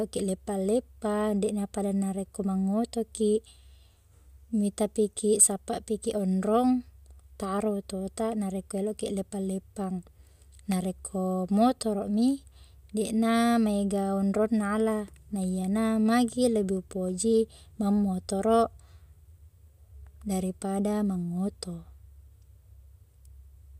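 At 10.72–10.74 s, a loud pop: one sharp thump about 10 dB above the speech, likely a voltage spike, seen as a full-band vertical stripe.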